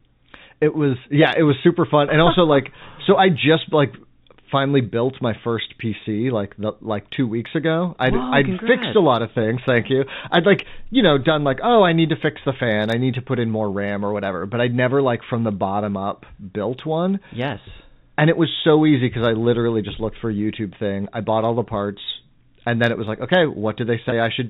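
Right near the end, at 24.10 to 24.12 s, there's packet loss with pitch repetition: about 20 ms, which fits a single dropped packet, bridged by repeating the last pitch period, giving a brief buzzy hold.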